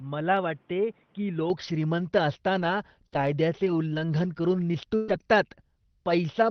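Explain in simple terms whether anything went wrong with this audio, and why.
In the first 1.5 seconds the system was likely recording through a poorer device, an input switched to a poorer device, so the speech sounds dull and slightly quieter, with nothing above 3.8 kHz.

Between 2.59 and 5.14 seconds there are scattered short gaps. About three bits of sound went missing, the longest roughly a tenth of a second, and were patched over, leaving brief hiccups.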